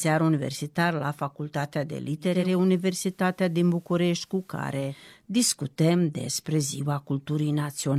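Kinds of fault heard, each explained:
Digital radio blending to analogue: the receiver drops its digital stream at 2.18 s, just before "discutăm despre", and cross-fades over 375 ms to the FM broadcast, so faint hiss appears well below the speech and the level dips about 1 dB until the return at 5.10 s.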